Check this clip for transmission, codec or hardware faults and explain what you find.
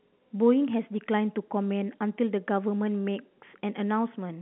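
No faults found: the speech sits in a standard G.711 A-law telephone band of roughly 150 Hz to 3.5 kHz with nothing above 3.9 kHz, and the coding damage is at most faint.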